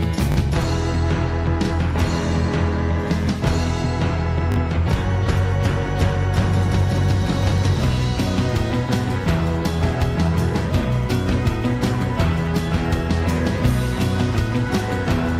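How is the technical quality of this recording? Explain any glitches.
Two brief glitches mar the recording. A repeated buffer occurs at 0.32 s and again at 4.52 s. Each time, fresh audio failed to reach the playback device in time, so it replayed its most recent block twice more. The repeats last about 40 ms, which fits a 20 ms buffer, and they cost around 40 ms of audio. With such short blocks, each event sounds like a tiny stutter or buzzy click with hard joins.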